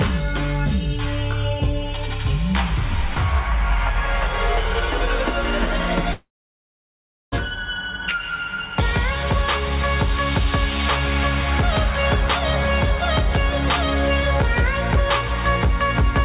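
The audio, band-limited to 4 kHz by its call codec, cuts out from 6.12 to 7.35 s. The last sound smears into a fading buzz or hiss, then about 1 s of silence follows. It resumes with roughly 1.2 s missing, likely a long network dropout.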